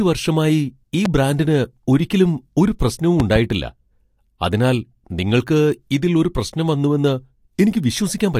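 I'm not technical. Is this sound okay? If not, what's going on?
No. There are two loud pops. A single sharp pop at 1.05–1.08 s follows "വർഷമായി ഈ", and a double pop at 3.20–3.38 s follows "ബ്രാൻഡിന് ഒരിക്കലും ഒരു പ്രശ്നവും". Both stand well above the speech, which continues underneath. The likely cause is an electrical jolt from a plug, switch or static.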